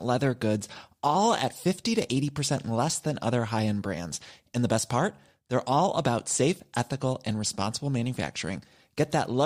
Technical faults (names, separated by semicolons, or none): none